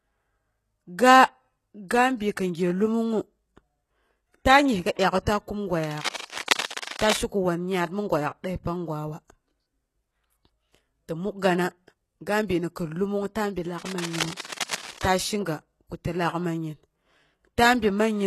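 Throughout the 18-second speech clip, the treble sounds synthetic and the codec damage is plainly audible. This is most likely HE-AAC compression at a low bitrate, consistent with about 16 kbps. Upper frequencies are rebuilt by copying lower bands upward, so sibilants come out gritty or lispy, and harmonics fail to line up across the crossover. A spectrogram would show nothing above 12.3 kHz, with the upper band appearing as blocky, repeated copies of the region below.

From 5.84 to 7.19 s, dense, uneven bursts of scratching rustle over the speech, only a few decibels below it. The likely cause is cable scratch noise from a worn cable, connector or control being moved, so that its contact resistance fluctuates rapidly. On the waveform this appears as ragged, irregular spikes layered on the signal. On a spectrogram it shows as broadband speckle. The same scratching returns from 13.78 to 15.06 s, around 10 dB below the speech.

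Inside these passages, pre-echo occurs at 6.16, 6.25, 6.65, 6.84 and 14.53 s. Each time, a short hiss runs ahead of a sharp attack, lasting 33, 53, 52, 33 and 34 ms respectively, and the onset sounds softened and smeared. This happens because the transform codec spreads quantisation noise sized for the loud attack across the whole block, including the quiet moment before it. A spectrogram shows a faint vertical wash of noise leading each onset.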